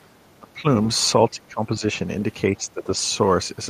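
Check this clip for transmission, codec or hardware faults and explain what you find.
One fault recurs in this speech: speech suppressed in double talk, at 0.4–0.65 s, 1.29–1.83 s and 2.56–2.88 s. The level sinks by about 20 dB in the first two stretches and about 10 dB in the third. The likely cause is an echo canceller that turned the near talker down along with the loudspeaker echo while the far side was talking.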